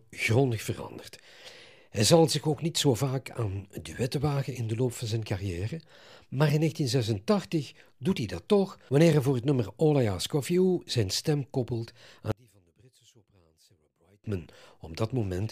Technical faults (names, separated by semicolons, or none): one channel inverted